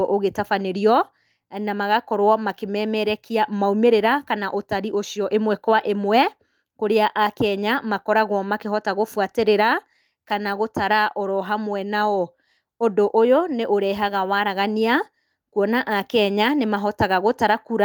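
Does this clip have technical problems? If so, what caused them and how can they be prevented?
No, nothing in this speech clip sounds like a technical problem, so there's nothing here that needs preventing.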